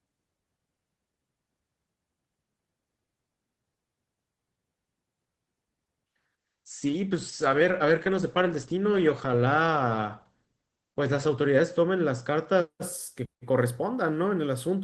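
A call bitrate drop hits this speech clip from 6.39 to 12.84 s. The encoder's rate falls from 32 kbps to 11 kbps, bottoming out for about 4.6 s. Coarser coding makes the voice rough and watery, and the audio bandwidth narrows from 20 kHz to 8 kHz, muffling the top end until it recovers.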